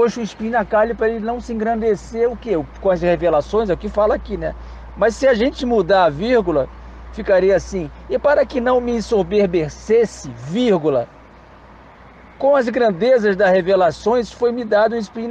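Nothing in the audio stood out as a technical problem on listening.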